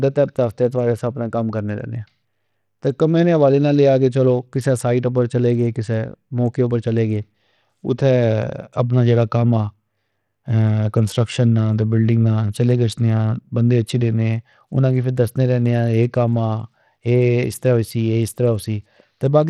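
A speech recording carries Bluetooth SBC compression from start to finish, most likely from a starved bit pool, fitting roughly 80 kbps. The treble flickers in and out and a gritty, aliased hiss rides on the sound, unlike the smeared, swirly artefacts of perceptual codecs.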